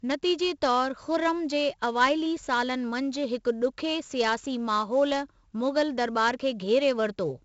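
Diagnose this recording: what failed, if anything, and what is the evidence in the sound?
The failure is at the codec stage: 4-bit ADPCM compression, heavily applied throughout the speech. Loud syllables carry a gritty hiss that rises and falls with level, and sharp onsets distort where the adaptive step lags. A spectrogram shows level-following broadband noise and nothing above 7.7 kHz, which fits 64 kbps at a 16 kHz rate.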